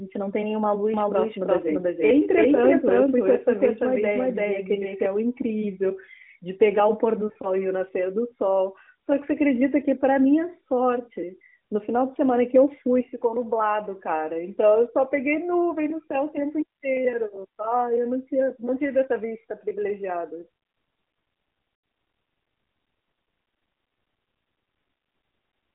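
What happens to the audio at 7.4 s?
Lost AMR speech frames disrupt the audio from 7.28 to 7.47 s. About 80 ms of sound, consistent with four 20 ms frames, fails its checksum across 160 ms, in runs of no more than 40 ms. The narrowband decoder fills each gap by repeating the last good pitch and vocal-tract settings at falling gain, producing brief dips and a warbling flutter.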